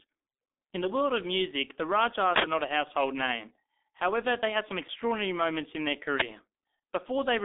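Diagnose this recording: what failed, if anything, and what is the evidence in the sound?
Codec stage: heavy G.723.1 coding throughout. The speech is muffled and hoarse, with blurred consonants and nothing above 3.7 kHz, which fits a low-bitrate stream near 6 kbit/s.

Driver or buffer stage: an uninitialised buffer produced a loud burst of digital noise at 2.36–2.44 s and a loud crack at 6.20–6.22 s, where blocks were played before audio was written.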